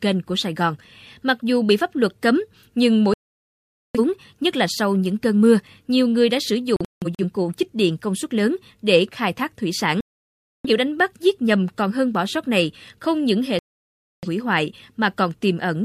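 Four digital broadcast dropouts, where the receiver loses good frames and mutes. Sound cuts at 3.14 s after "pháp luật cấm nhưng" for 0.81 s, breaks into short holes over 6.76–7.24 s, then vanishes for 0.64 s at 10.01 s after "khai thác thủy sản" and at 13.59 s after "này không những hệ".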